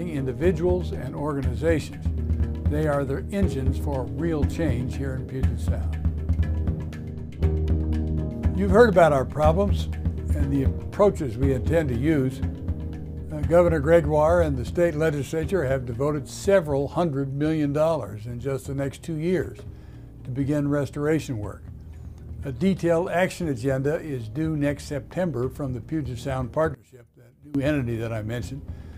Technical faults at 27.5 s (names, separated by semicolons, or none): one channel inverted